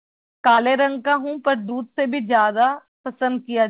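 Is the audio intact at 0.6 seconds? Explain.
No. A short concealed packet loss runs from 0.54 to 0.595 s: about 40 ms of the call arrived too late, and the receiver spent 34 ms continuing the preceding speech before blending back. The join is heard as a brief smear or wobble.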